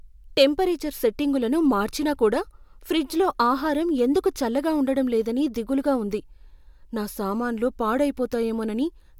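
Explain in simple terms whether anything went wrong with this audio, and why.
Nothing went wrong: the recording comes across as steady and intact throughout, with no audible technical problems anywhere in the audio.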